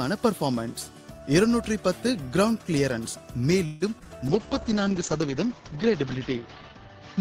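A call audio freeze from 3.65 to 3.83 s stretches the last sound into a fading buzz or hiss for about 0.16 s before the audio resumes where it stopped, likely from delayed packets draining the jitter buffer. Short concealed packet loss follows at 3.99 to 4.02 s and 4.04 to 4.07 s, where about 20 ms each went missing and was patched with extrapolated sound, heard as brief smears. From 4.28 s to the end, a call bitrate drop from 32 to 8 kbps makes the audio rough and muffled, with bandwidth narrowing from 20 kHz to 8 kHz.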